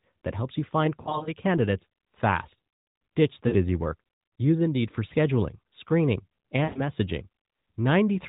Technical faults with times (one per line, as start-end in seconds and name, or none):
1.02-1.33 lost AMR speech frames
3.48-3.54 lost AMR speech frames
6.64-6.81 lost AMR speech frames